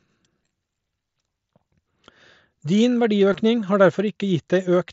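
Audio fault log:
3.33 s, concealed Bluetooth headset packet loss. About 15 ms of speech never arrived, which fits two dropped packets. The receiver patched the gap with a repeated stretch of recent waveform. The run sounds like a brief buzzy tone, with a small warble where real audio returns.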